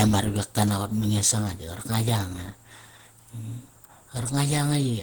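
Throughout the speech, Opus compression is plainly audible: the sound is hoarse and grainy, with less MP3-style swirling and fewer watery holes, because missing bands are filled with noise. That points to a low bitrate near 16 kbps, likely in the hybrid speech mode.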